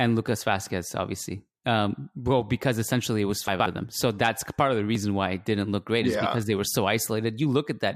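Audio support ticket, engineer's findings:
Chunks out of order, 3.48 to 3.66 s, after "because essentially it was", before "of them". Probable component: playback buffer or packet reassembly. One 60 ms chunk arrived late and was written two chunks behind its slot. No audio lost, but the 0.18 s span plays scrambled, with three hard joins and a brief jumbled stretch of speech.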